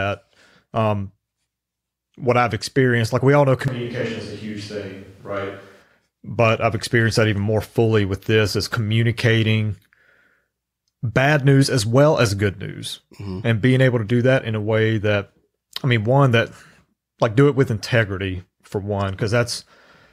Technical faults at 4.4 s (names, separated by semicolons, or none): switch to a distant microphone